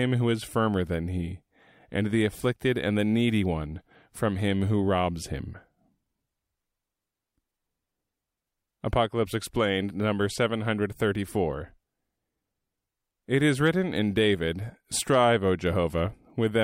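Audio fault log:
No technical fault can be heard anywhere in the speech recording, and the signal stays steady and intact from its first moment to its last.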